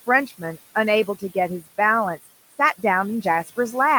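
Speech in which the background sinks between phrases and swells back underneath them. These are noise suppressor artifacts: the processing pulls down the bands it judges to be steady noise by about 14 dB, working frame by frame, so the floor rises and falls with the voice. The room noise, sitting about 17 dB below the speech, is what gets pumped this way. Between 0.27 and 0.58 s, parts of the speech turn faint and swallowed, dropping by as much as about 13 dB across roughly a tenth of a second in total. This is speech cut by the noise suppressor, which mistook those quieter speech sounds for background and turned them down along with it.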